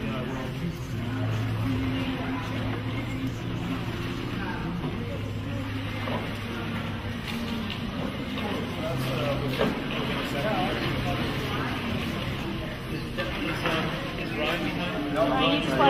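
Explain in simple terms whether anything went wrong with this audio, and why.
Nothing went wrong with this audio.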